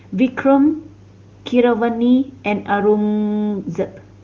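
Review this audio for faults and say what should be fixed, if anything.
Nothing here needs fixing: the speech is carried by the AMR wideband (HD Voice) codec at its top rate of 23.85 kbit/s, and no audible problem calls for repair or prevention.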